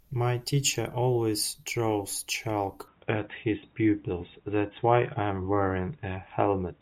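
At 2.88 s the speech turns dull and boxy, with no gap at the change, and stays that way to the end. Nothing above about 3.8 kHz survives from there. The level shifts by around 5 dB. A faint new background noise also appears, well below the speech. The likely cause is an input switched to a poorer device, such as another microphone or a headset's call profile. That device has its own narrower band, level and noise floor.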